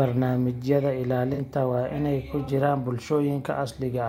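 Twice in this speech recording, corrupted AAC frames reached the decoder, which caught the damaged data and concealed the frames itself rather than playing out garbage. That corrupt frame concealment covers 1.33 to 1.39 s and again 2.44 to 2.48 s, each span short enough to fit about two lost frames.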